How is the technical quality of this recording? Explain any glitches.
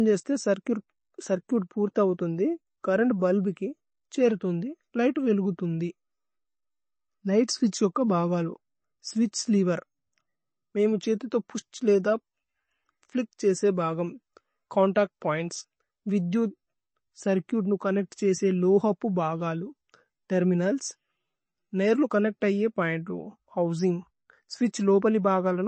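The technical quality is poor, held back by one fault that runs through the whole speech clip. Likely MP3 compression at a low bitrate, the plainly audible damage pointing to roughly 32 kbps. The starved encoder removes everything above 8.3 kHz and drops weak frequency lines frame by frame, so the speech sounds dull and watery, with swirling, metallic chirps on s sounds and smeared consonant attacks.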